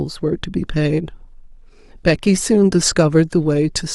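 No technical faults are audible anywhere in the speech recording.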